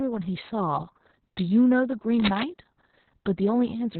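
Heavy Opus voice compression runs through the whole clip. The coder's SILK mode at a very low rate, which fits roughly 6 kbps narrowband, cuts everything above about 4.3 kHz and codes the excitation coarsely, so the speech sounds muffled, hoarse and slightly robotic.

From 2.20 to 2.43 s, cable scratch noise appears, likely from a worn cable or connector shifting and rapidly changing its contact resistance. It adds dense, uneven bursts of scratching only a little quieter than the speech itself.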